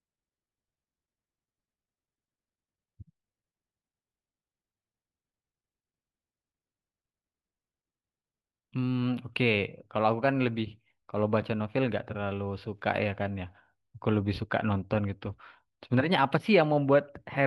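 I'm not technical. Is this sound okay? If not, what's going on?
Yes, nothing in this recording stood out as a problem when I listened.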